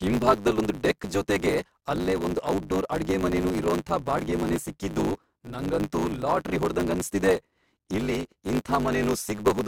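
Throughout, a block size mismatch (truncated) clips each block's end, causing a 100 Hz buzz and speech 1.16 times faster with unchanged timbre, unlike a sample-rate error.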